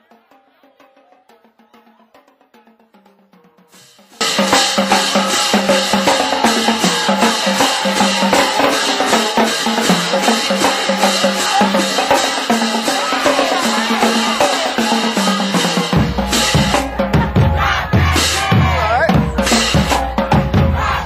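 One channel inverted, from 0.00 to 4.21 s: the summed sound drops by about 33 dB and turns faint, with the centre almost gone, before returning at full level after 4.21 s. The likely cause is reversed polarity on one stereo channel, so material common to both sides cancels when they are combined to mono, leaving only the small difference between the channels audible.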